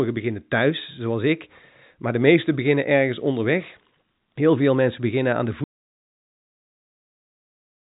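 The input feeding this speech recording was most likely lost at 5.64 s, whether through a disconnected device, a broken link or a mute switched on, while the recorder kept writing silence. The result is an audio dropout to silence: right after "mensen beginnen aan de" the sound stops dead mid-phrase and stays gone through to the end of the clip, with no room tone or hiss in the gap. Before the cut, the narrow telephone bandwidth of G.711 coding can be heard.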